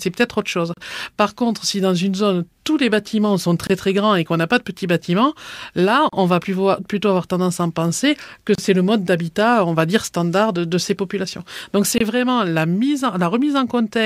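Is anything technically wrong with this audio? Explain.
Yes. There is a gap at a join of encoded pieces at 0.74 s after "autre chose", 3.67 s, 6.09 s between "de petits bâtiments là" and "on va plutôt avoir", 8.55 s, and 11.98 s before "vraiment la mise". The speech was encoded in separate pieces and joined untrimmed, so encoder start delay and last-frame padding stay in. Each join leaves a dropout of 24 to 35 ms with smeared edges, and the speech then resumes where it stopped.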